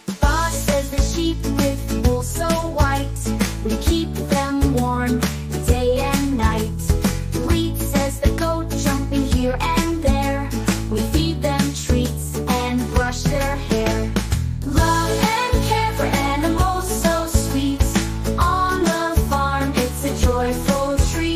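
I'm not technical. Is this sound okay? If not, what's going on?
Yes, no faults can be heard.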